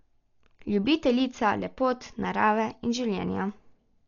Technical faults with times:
0.00-4.08 Dolby Digital compression

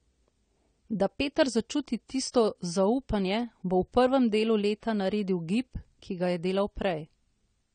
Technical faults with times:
0.00-7.74 AAC compression

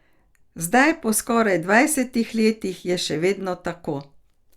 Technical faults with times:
none

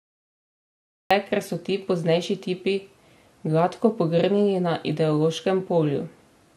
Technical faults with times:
0.00-1.11 cut-off start

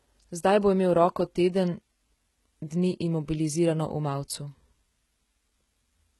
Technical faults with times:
0.00-6.20 HE-AAC compression

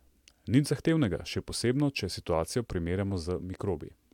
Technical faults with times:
none

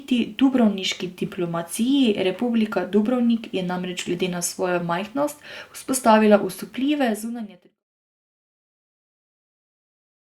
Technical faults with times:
none

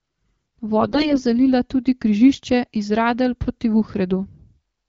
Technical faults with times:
0.81-1.20 AMR bit errors

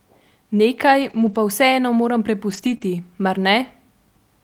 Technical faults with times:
1.01-1.35 lost packet rebuilt from error correction
2.49-2.84 lost packet rebuilt from error correction
2.77-2.82 short concealed packet loss

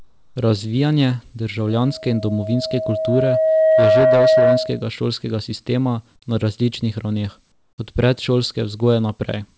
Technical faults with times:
0.00-0.36 comfort noise in place of the background
1.68-4.88 loudspeaker feedback squeal
7.52-7.78 comfort noise in place of the background

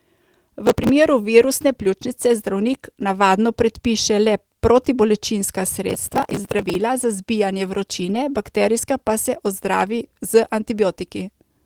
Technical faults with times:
0.67-0.89 processor overload crackle
5.90-6.75 processor overload crackle
7.97-8.15 lost packet rebuilt from error correction

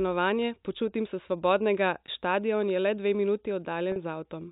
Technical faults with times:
2.06-2.08 packet loss with pitch repetition
3.92-3.96 packet loss with pitch repetition

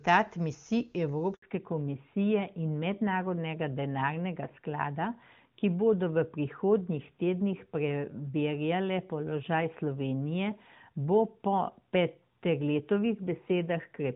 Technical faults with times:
1.34-1.42 handover gap
1.42-14.15 fallback to narrowband

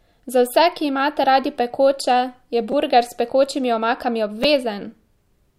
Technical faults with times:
2.72 repeated buffer
4.43 repeated buffer

